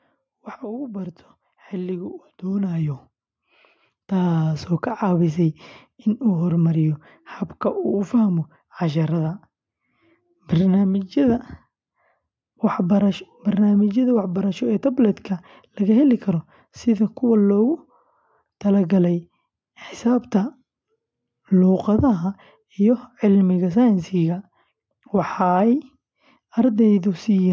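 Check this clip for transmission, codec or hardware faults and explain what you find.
One fault stands out: automatic gain rising, from 0.59 to 6.33 s. Over nearly six seconds the level climbs by about 12 dB as the automatic gain control, having judged the input too quiet, steadily raises its gain, so the speech and the background noise swell together. On a waveform the envelope widens in a slow ramp, and a spectrogram shows the noise floor brightening in step with the speech, consistent with call microphone processing whose content stops at 8 kHz.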